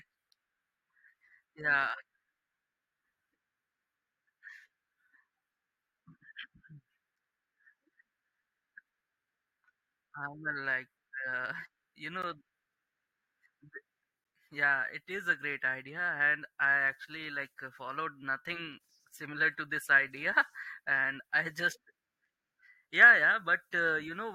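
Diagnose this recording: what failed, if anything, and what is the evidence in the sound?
Hard-edged silent holes at 12.22, 14.24 and 22.25 s: a gap between stream segments during playback, where the timestamps of 2-second segments leave 4 to 12 ms unfilled.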